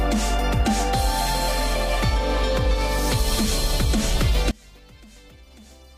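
At 4.51 s the sound drops by about 26 dB and stays low to the end. What remains is faint. This points to one channel inverted. Likely one stereo channel has reversed polarity, so the shared content cancels when the channels are summed to mono.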